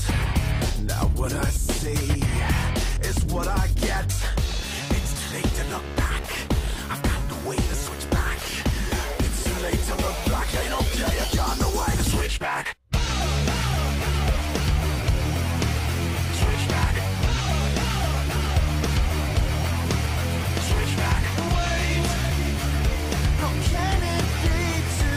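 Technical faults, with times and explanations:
No technical faults can be heard anywhere in the audio.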